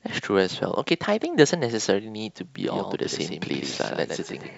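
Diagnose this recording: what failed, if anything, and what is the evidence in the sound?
A doubled audio track begins abruptly at 2.55 s and runs to the end: a clean, full-band copy of the speech trails by about a tenth of a second, around 5 dB quieter, with no decay or room colour. The likely cause is the signal being captured twice through a second, slower path.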